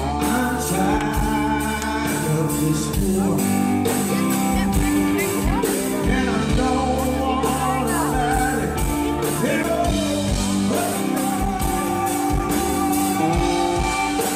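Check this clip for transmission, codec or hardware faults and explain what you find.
One hardware fault is audible, a CD skip at 9.63 s. The sound ticks and drops out for a very short moment, roughly a hundredth of a second, then carries on from a different point, so the flow jumps abruptly instead of continuing smoothly. This happens when the player's laser loses its track, from a physical knock or a flaw on the disc, and lands on another turn of the spiral. The player briefly mutes and resumes playback from the new position.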